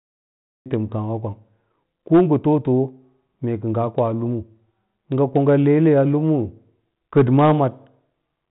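The clip opens with a cut-off start: digital silence until 0.66 s, then speech begins abruptly mid-sound. Capture began late, so there is no natural onset. The waveform jumps from a flat line straight into the speech, and the spectrogram shows a sharp vertical edge.

Hard clipping follows at 2.14 to 2.52 s (about 5 dB over), 5.36 to 6.00 s (about 1 dB) and 7.17 to 7.63 s (about 5 dB). Peaks exceeded the stage's range and were sliced flat, heard as crackly fuzz that is strongest in the 5 dB passages. The waveform shows squared-off tops, and the spectrogram shows smeared harmonics streaking upward, within the G.726 telephone band that stops near 3.9 kHz.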